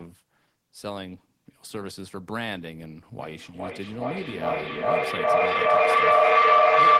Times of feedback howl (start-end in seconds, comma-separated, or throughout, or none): 3.19-7.00